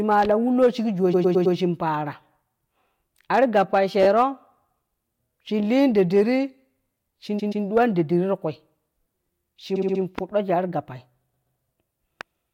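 Hard clipping comes first, from 0.11 to 0.67 s, with peaks driven about 4 dB past what the stage could pass, so their tops are sheared flat. That shows up as crackle and a gritty edge on the loudest syllables, not the rounded thickening of soft saturation.

At 1.13 to 1.55 s repeated frames set in: a 106.7 ms block of speech plays four extra times, a machine-gun stutter that stretches the audio by about 0.43 s. Unlike a dropout, nothing goes missing. The same fragment simply recurs.

Clipping returns from 3.34 to 4.23 s at about 3 dB over. Inside it, at 4.03 to 4.06 s, a 16 ms block repeats twice more, a brief stutter that adds 32 ms.

Clipping appears again from 5.77 to 6.21 s at about 2 dB over, which is milder. More repeats follow: at 7.38 to 7.64 s a 128 ms block plays twice more. At 7.77 to 7.84 s a short clipped burst about 3 dB over crackles on its peaks. At 9.75 to 10.01 s a 64 ms block recurs four extra times, and at 11.32 to 11.58 s a 128 ms block recurs twice. 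Each of those last three adds about 0.26 s.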